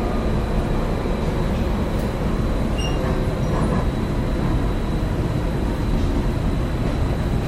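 No dropouts, clicks, distortion, timing slips or level problems turn up anywhere in these sounds.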